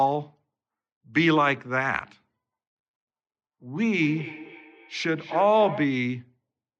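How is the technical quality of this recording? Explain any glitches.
The speech has one clear fault. From 3.88 to 6.03 s there is feedback echo between two devices. A second device plays this audio back into the microphone, and no canceller removes it. The speech returns roughly every third of a second, thinner and ringing, about 14 dB below the speech.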